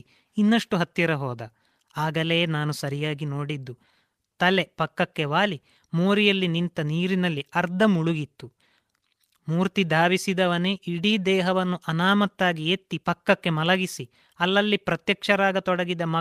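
Nothing in this speech recording stands out as a technical fault, so there's no moment or problem to point to along the way.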